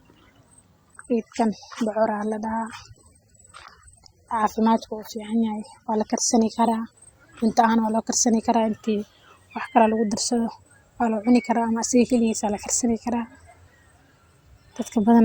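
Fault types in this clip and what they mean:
Adaptive stream at a lower bitrate: from 0.94 s to 6.94 s the speech switches abruptly to a poorer-quality stream and back, with no gap or dropout. The sound during that stretch fits an AAC stream falling from around 96 to about 27 kbit/s. On a spectrogram the upper edge is a hard ceiling at 16.6 kHz, with blotchy, smeared treble below it. The waveform's continuous envelope shows the switch is seamless.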